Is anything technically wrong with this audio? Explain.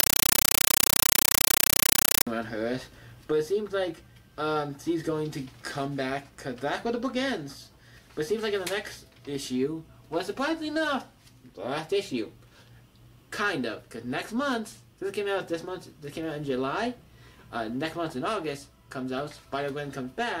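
Yes. From 0.0 to 2.27 s, a compressed stream is played as audio. Undecoded Dolby Digital data is treated as samples, giving loud chattering static that fits a 384 kbps AC-3 stream. The waveform shows 8 ms noise bursts between flat zero padding, repeating 31.25 times a second, and the spectrogram shows matching broadband vertical stripes.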